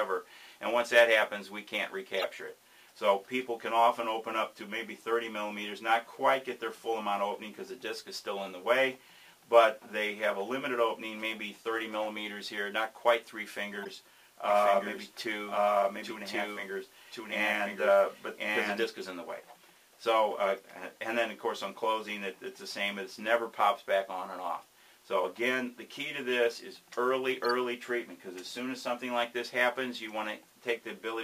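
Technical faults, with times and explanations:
2.17–2.24 s, 13.83–13.90 s, 20.57 s, 27.45–27.51 s: corrupt frame decoded. Damaged compressed frames were played anyway. Misplaced energy gives brief chirps or noise bursts; the 20.57 s one is faint.
14.50–18.84 s: doubled audio track. A full-band copy, about as loud, trails by about a second. It starts and stops abruptly, likely from a second, slower capture path.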